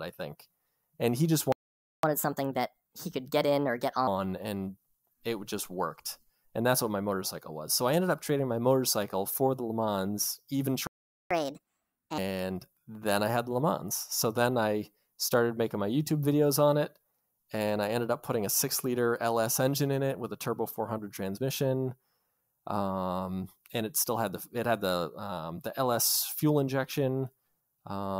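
A playback stall cuts the speech off between 1.52 and 2.03 s, about half a second of silence, most likely because the player ran out of buffered data or its thread was held up, before picking up where it left off.

A catch-up at higher speed follows from 2.03 to 4.07 s: the backlog is resampled at 1.25 times normal speed, so the speech hurries and rises by about four semitones, then settles back.

A second playback stall silences the audio from 10.87 to 11.31 s, roughly 440 ms.

Another catch-up at higher speed runs from 11.31 to 12.18 s, this time at 1.5 times speed, so the voice jumps up by about seven semitones in a brief chipmunk-like burst before returning to normal pace.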